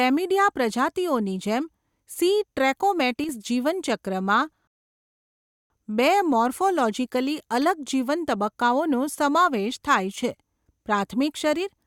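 From 3.24 to 3.29 s the speech dips abruptly by about 6 dB for 50 ms, likely one channel drops out before the mono sum. At 4.67 s the audio cuts to silence, then resumes exactly where it stopped at 5.70 s: a rebuffering stall, adding about 1.03 s while the player waited for data.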